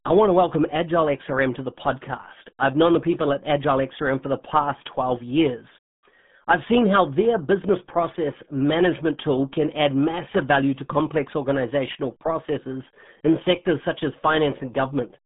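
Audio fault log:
throughout – RealAudio 14.4 codec: muffled, gargly speech with nothing above 3.8 kHz, heavily mangled by a low-bitrate dial-up codec, which fits about 8 kbit/s.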